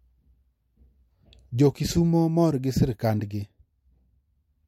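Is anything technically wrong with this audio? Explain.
No, nothing technically wrong turns up in this speech recording on listening.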